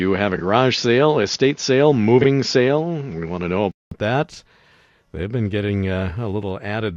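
From the start to 3.9 s, the speech is dull and capped near 7 kHz. This is likely an input switched to a poorer device. A 200 ms silence and a level jump of about 5 dB follow.

Frames out of order cause garbled flutters at 0.36–0.41 s, 2.21–2.26 s and 5.98–6.02 s, the last just after "been getting". Single 21.3 ms blocks swapped.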